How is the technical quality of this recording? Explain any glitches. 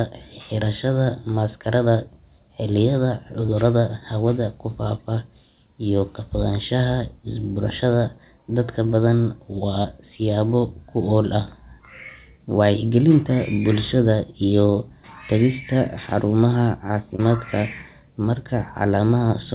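The speech comes through a narrowband call path with nothing above 4 kHz, which fits G.711 A-law at 64 kbps, and it has three brief glitches.

Short concealed packet loss occurs at 3.46–3.50 s, 9.82–9.86 s and 17.16–17.20 s. Each time, 20 ms arrived too late, so the receiver extended the preceding sound, leaving a brief smear or wobble.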